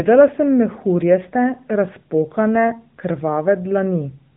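From start to finish the speech sounds boxed-in and telephone-like, with a buzzy, synthetic edge and nothing above about 3.8 kHz. That is the AMR narrowband mobile codec at work. It rebuilds each 20 ms frame from a vocal-tract model excited by a handful of pulses, and everything past the narrowband ceiling is gone. The damage is plainly audible, which fits one of the mid-rate modes, around 8 kbps.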